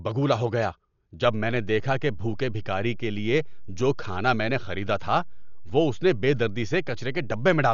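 Speech clip that sounds dull and rough throughout, most likely from Dolby Digital compression at a low bitrate, around 48 kbps. The spectrogram shows nothing above 7 kHz and noisy, fluttering fill around the voiced bands. A DC step at 1.25 s gives a low thump. On the waveform, the zero line jumps and stays offset until the end at 7.73 s, while the speech continues unchanged.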